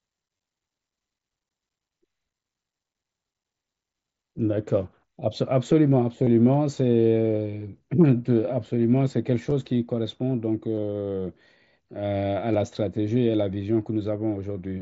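At 0.37, 6.24, 9.5, 10.76 to 10.83 and 12.53 s, concealed Bluetooth headset packet loss: the receiver patches missing packets by repeating recent waveform, so these brief gaps sound like buzzy blips, not silent dropouts.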